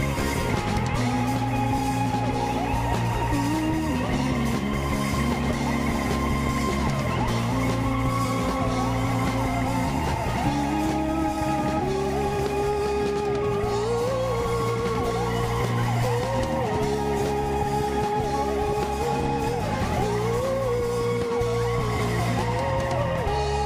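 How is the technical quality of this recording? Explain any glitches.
The recording has two short discontinuities, both audible as tiny skips forward in the sound. At 1.78 s and again at 21.79 s, a dropped buffer (overrun) is the likely cause: the samples weren't read out before being overwritten, so a sliver of audio, roughly 1.5 ms and then roughly 4 ms, is lost and the sound on either side is butted together. On a waveform this shows as an abrupt seam rather than a gap, with no flat silent stretch.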